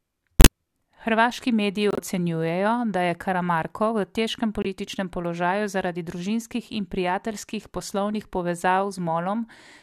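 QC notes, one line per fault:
0.40–0.47 s, 1.91–2.00 s and 4.62–4.66 s (between "v težkem" and "položaju zaradi družinskih in"), corrupt frame muted: the speech drops abruptly into dead silence for 39 to 92 ms, then resumes on time. Damaged compressed frames were rejected by the decoder and replaced with silence. The gap lengths fit runs of two, three and one frames.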